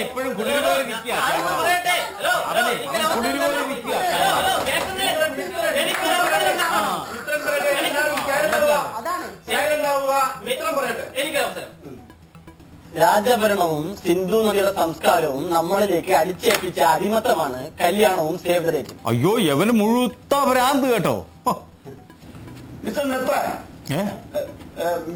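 Throughout the clip there is imaging from sample-and-hold upsampling: samples were repeated without smoothing, which fits a 12 kHz source raised fourfold. Mirrored copies fill 6 to 12 kHz at about 16 dB below the signal, heard as a metallic fizz that tracks the level.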